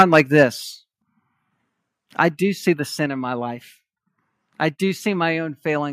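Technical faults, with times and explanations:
0.00–0.43 s, microphone overload: The loudest moments have their tops cut off, adding a crackling, distorted edge. Input volume was likely set too high, driving peaks about 7 dB past the converter's limit, flattening roughly one and a half percent of samples.
0.02 s, 1.02 s and 3.06 s, microphone volume stepped down: Voice and background drop suddenly in level, by about 3 dB, then about 6 dB, then about 3 dB between "I do see the" and "in my life". Call software likely lowered the input volume after detecting overload.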